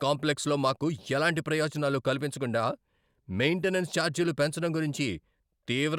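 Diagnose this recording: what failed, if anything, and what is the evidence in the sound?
Nothing failed; no faults heard.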